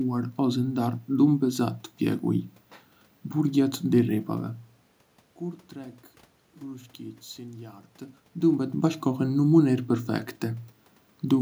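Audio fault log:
No technical faults detected.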